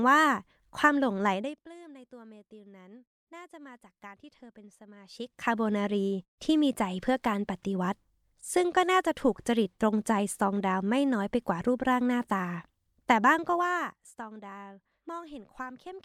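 No technical fault can be heard anywhere in the speech. The level is changed smoothly, like a fader, without any step or click at the transitions.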